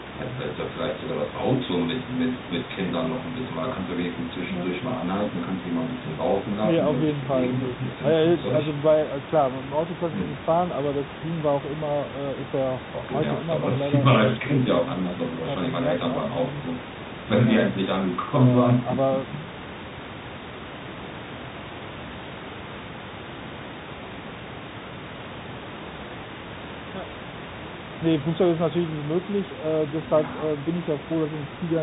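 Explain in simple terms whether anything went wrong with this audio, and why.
Yes, something went wrong: the speech was squeezed through the Bluetooth CVSD headset codec from start to finish. It throws away everything above 4 kHz and struggles with loud, sharp sounds, so the voice sounds muffled, s sounds turn scratchy, and a grainy hiss sits underneath, with the background room noise audible behind it.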